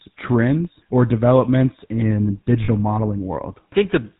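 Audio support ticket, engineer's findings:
GSM full-rate codec, whole clip. Buzzy, gravelly roughness on the speech, plainly audible. Nothing above 4 kHz. Sound fits 13 kbps GSM full rate. Vocal-tract model driven by sparse, regularly spaced pulses. Excitation decimated to every third sample, hence the grit.

Lost GSM frames, 2.64 to 2.69 s. Brief rough, metallic ring. Consistent with two 20 ms frames concealed. Decoder repeated the last good frame's parameters. Too short to fade to silence.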